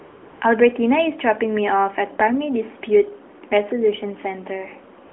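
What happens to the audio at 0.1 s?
AMR comfort noise runs from 0.00 to 0.42 s, covering 0.1 s. The sending phone judged this opening silent and sent no speech frames, so the receiver filled it with smooth, steady synthetic noise built from a coarse level-and-spectrum description instead of the real background.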